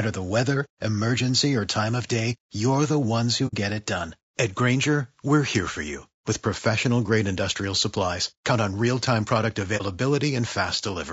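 Throughout, the speech sounds rough and grainy, with noise between harmonics and a thin top band, likely from low-delay AAC compression (AAC-ELD) at about 32 kbps. At 3.47 to 3.54 s and 9.77 to 9.82 s, AAC frame loss with muting leaves a soft-edged silent gap at the first and a brief dip at the second. The decoder zeroes the missing audio and fades out and back in.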